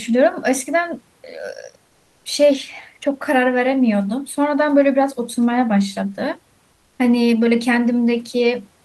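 From 6.73 to 6.99 s, the sender likely stopped transmitting during a pause in the speech (discontinuous transmission, as a voice-activity detector in an Opus-style codec does), and the receiver filled the gap with generated noise. The result is comfort noise in place of the background: for about 260 ms the real room noise, sitting about 43 dB below the loudest speech, gives way to a smooth, featureless hiss roughly 2 dB quieter, then the genuine background returns.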